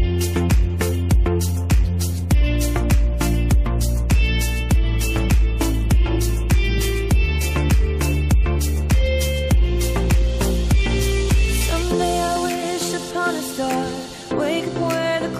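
No technical faults are audible anywhere in the audio.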